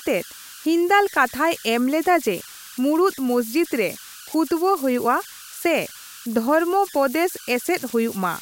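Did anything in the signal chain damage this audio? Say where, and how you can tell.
Yes. The converter shows converter idle tones throughout the clip: a tone around 1.5 kHz in the pauses and grainy noise under the speech, about 18 dB below the signal. An undithered delta-sigma stage settles into repeating bit patterns on small inputs. Unlike mains hum or external interference, the pitch depends on the input's DC offset.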